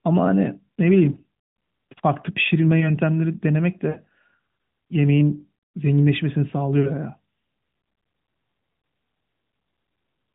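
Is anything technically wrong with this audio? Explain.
Yes. There are lost AMR speech frames at 1.12–1.21 s, 3.90–3.99 s and 8.80–8.82 s. Corrupted frames failed their checksum, so the decoder repeated the last good pitch and vocal tract settings at falling gain. Each gap's length fits two, three and one lost 20 ms frames. The sound smears into a brief warbling dip, longest at 3.9 s, and the speech returns weak or rough for a moment.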